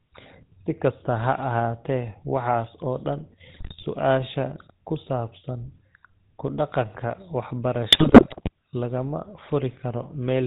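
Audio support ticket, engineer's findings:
Buzzy, gravelly roughness across the whole speech clip, top end gone above 4 kHz. Probable component: GSM full-rate codec, which fits a 13 kbit/s stream. Vocal-tract filter driven by sparse, regularly spaced pulses; excitation decimated to every third sample. Codec damage plainly audible throughout, not confined to any one passage.

Squawks, pops and gargling breakup, 3.48 to 3.85 s and again 7.90 to 8.49 s, second burst longer. Probable component: GSM bit errors on a weak radio link, consistent with an error rate of a few percent. Corrupted filter, pitch and gain parameters warp the spectrum or spike the level frame by frame.

Single sharp broadband tick at 4.00 s, just after the first breakup, unrelated to the speech. Probable component: bit error spike, one flipped bit in memory or on a digital link. One sample jumps by a power of two and snaps straight back, so the click is instantaneous and spectrally flat.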